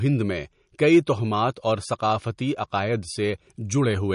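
Throughout this speech recording the sound is watery and swirly, with the treble cut off cleanly at 10.6 kHz. This is likely MP3 compression at a low bitrate, around 40 kbps, starving weak frequency lines so they flicker between frames.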